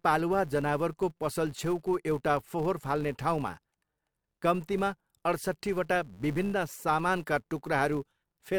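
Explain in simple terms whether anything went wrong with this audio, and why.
Something did go wrong: a buzz runs under the speech from start to finish. That's a filter restarted on every block. It forgets where it was and kicks off each short chunk from silence, leaving a tiny tick at about 172 Hz, which fits 256-sample blocks. The ticks get louder when the speech does.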